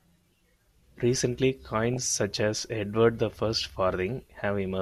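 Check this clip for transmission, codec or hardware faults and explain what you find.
Two bursts of DAB burbling break into the speech. The first runs from 1.94 to 2.11 s, ending just before "such as". The second runs from 4.12 to 4.34 s. Weak reception lets a small fraction of a percent of bits slip past error correction into the MP2 data. Corrupted samples put short blips of noise into single sub-bands, and corrupted scale factors make sub-bands leap in level for up to a frame. Each burst puts short blips of noise over the speech.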